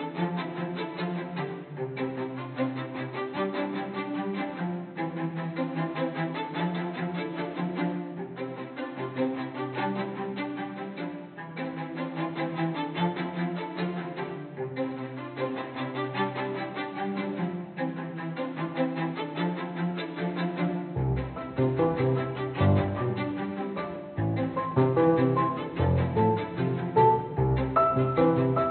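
No technical faults are audible.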